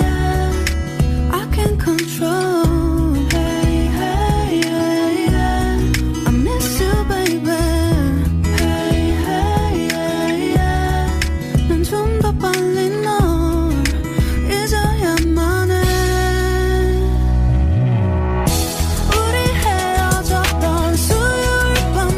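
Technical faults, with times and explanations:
No technical faults are audible.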